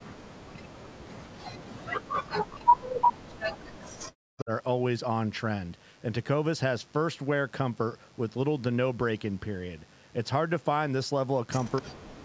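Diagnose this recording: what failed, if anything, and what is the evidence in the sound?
The failure is in call processing. Speech suppressed in double talk occurs at 0 to 1.32 s, 1.56 to 3.06 s, 3.25 to 4.51 s and 11.81 to 12.24 s. The speech sinks by roughly 40 dB or breaks up. The echo canceller likely mistook overlapping talk for echo and ducked both.

An echo leak appears at 3.01 to 3.13 s and at 11.76 to 11.82 s. A brief copy of the speech returns 256 ms late. The first scrap is about 5 dB louder than the speech. The second is faint. A loudspeaker-side echo canceller likely left residual pickup unremoved.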